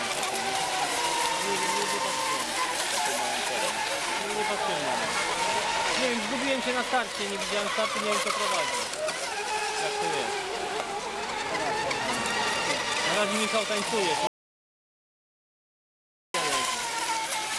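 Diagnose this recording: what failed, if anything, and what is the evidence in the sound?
An audio dropout to silence runs from 14.27 s to 16.34 s. The sound stops abruptly mid-flow and returns just as abruptly about 2.07 s later. The gap is silent, with no room tone or noise floor underneath. Whatever happened during those two seconds is simply absent. The stage is the input side, ahead of the recorder. The likely cause is a lost device link or a momentary mute, while the recorder kept writing silence.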